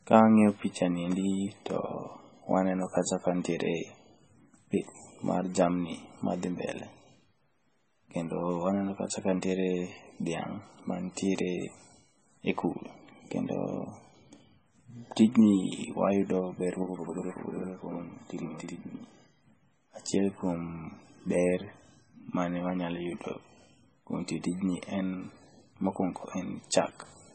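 Across the whole recording the speech has lost everything above 8.3 kHz, and what remains sounds watery and swirly, with metallic chirping on s sounds and blurred consonant onsets. This is heavy MP3 compression, most likely at a very low bitrate of around 17 kbps. Short of bits, the encoder cut the treble at a fixed point and discarded weak frequency components. Those components drop in and out from frame to frame, which produces the swirl and chirps.

From 16.83 to 19.14 s, a channel delay (doubling) appears. One channel ran late by about 85 ms, which fits a 4096-sample buffer, and was then mixed into mono with the other. That gap is too long for the two copies to fuse, so the speech is heard twice at equal level, as a distinct doubled slap echo trailing each syllable, before the delay clears.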